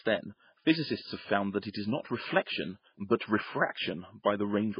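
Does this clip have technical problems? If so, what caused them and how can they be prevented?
Yes. Throughout, the speech sounds watery and swirly with smeared onsets, and nothing is heard above 5.1 kHz, which fits heavy MP3 compression near 16 kbps. Likely a bit-starved encoder cut the treble and dropped weak frequency lines frame by frame. Encoding at a higher bitrate prevents this.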